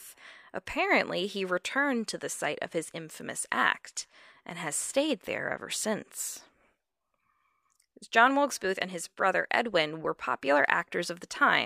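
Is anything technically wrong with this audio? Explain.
No, there are no technical faults in this speech recording.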